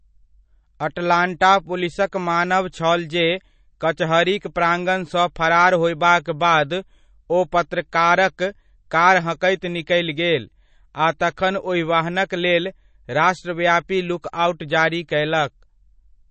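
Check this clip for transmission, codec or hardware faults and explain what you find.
Two codec faults are present in this speech clip: one runs through the whole recording, and one brief pre-echo occurs near the 11-second mark.

Throughout, the audio has no content above about 8.3 kHz, and the damage is plainly audible: a watery, swirling texture, with sibilants turning metallic and chirpy. The likely cause is MP3 compression at a low bitrate, something in the region of 32 kbps. Short of bits, the encoder cuts everything above a fixed frequency and zeroes weak spectral lines, which then flicker on and off between frames and produce the swirl.

At 11.19 s there is a pre-echo: a hiss about 13 ms long arrives just ahead of a sharp attack, and the attack itself sounds softened and smeared. The codec spread its quantisation noise across the whole transform block. Because the attack landed late in that block, noise sized for the loud onset also filled the quiet moment before it, where nothing masks it.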